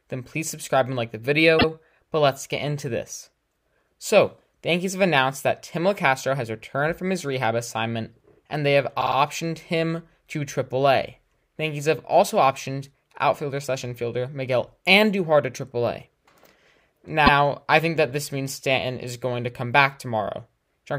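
Repeated frames at 1.58 s and 17.26 s, where a 78 ms block of coded audio replays once, and at 9.00 s, where a 52 ms block replays three times. Each is a stutter that adds time rather than leaving a gap.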